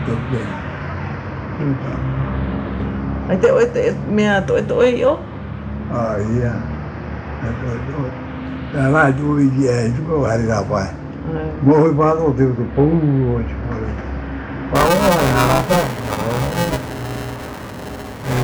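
From 14.75 s to the end at 18.44 s the audio shows buffer tearing: a robotic rattle at 345 Hz, which fits a 128-sample buffer. The writing side and the playback side have drifted so they cross within every period, leaving roughly a third of each buffer filled with audio from around ten milliseconds earlier. On a waveform, sharp discontinuities repeat every 2.9 ms. On a spectrogram, a dense comb of 345 Hz harmonics and fine vertical striations sit over the signal.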